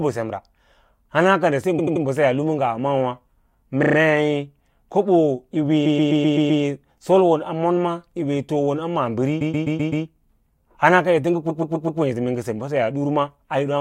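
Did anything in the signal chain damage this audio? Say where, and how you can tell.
Yes, there are repeated frames, a storage or transport fault at the codec frame level. The speech stutters at 1.78–2.04 s, 3.82–3.96 s, 5.85–6.62 s, 9.40–10.04 s (right after "yiwee toom a"), and 11.49–12.00 s, with the same short slice replaying. The loops run 85.3 ms, 25.3 ms and 128 ms, which fits a run of compressed frames being sent again, stretching the clip by 0.14 to 0.77 s at each spot.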